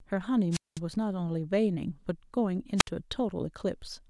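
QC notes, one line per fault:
0.51–0.79 s, wireless microphone squelch dropout: the RF signal fades, hiss rises briefly, then the receiver squelch mutes the speech for about 0.2 s before it returns.
2.76–2.89 s, wireless microphone squelch dropout: a shorter fade, a quick burst of static and a gate closure of about 60 ms as the receiver mutes, then speech resumes.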